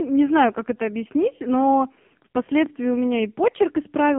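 Throughout, heavy AMR narrowband mobile codec damage: nothing above 3.4 kHz, plus a buzzy, synthetic texture, fitting about 5 kbps, that plain band-limiting wouldn't cause.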